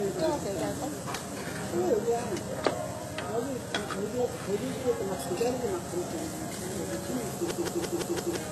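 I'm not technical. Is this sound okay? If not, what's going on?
No. Throughout the clip there's a dull quality with nothing above 12.3 kHz, most likely from transcoding between lossy codecs: the sound was squeezed by one compression format, then re-squeezed by another, so both sets of flaws pile up and the top end stays missing.

From 7.51 to 8.36 s there's a system hang loop: the computer briefly froze while the sound hardware kept replaying its last chunk. One 171 ms slice repeats five times, about six per second, giving a machine-gun stutter, and roughly a second of real audio is lost.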